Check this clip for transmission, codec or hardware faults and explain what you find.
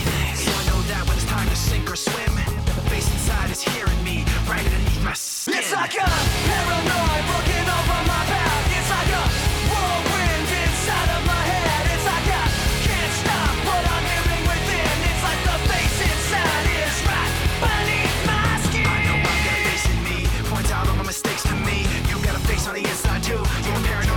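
No transmission, codec or hardware faults turn up anywhere in the clip.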